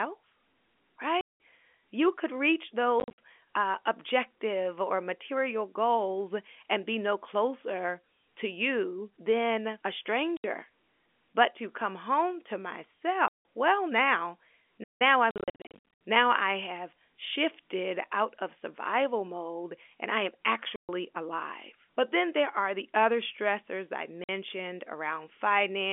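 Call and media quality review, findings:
Packet loss filled with silence: 1.21 s, 3.0 s, 10.37 s, 13.28 s (before "well now"), 15.3 to 15.95 s, 20.76 s (after "mode and I am"), 24.24 s (after "the other stressors I"). Hard-edged silent holes of 50 to 190 ms; 3.0 s and 15.3 s are scattered bursts. Gap sizes fit 10 ms packets, on a G.711 telephone-band line.

Playback stall: 14.83 s, 168 ms. Audio halts mid-flow, then resumes; likely a player buffer underrun or blocked audio thread.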